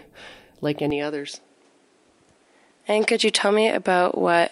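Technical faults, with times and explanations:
0.90 to 4.52 s, input switched to a poorer device: from 0.90 s the speech carries nothing above 11 kHz and a new noise floor about 40 dB down, with no gap or level step, likely because the input moved to a narrower-band microphone or headset profile.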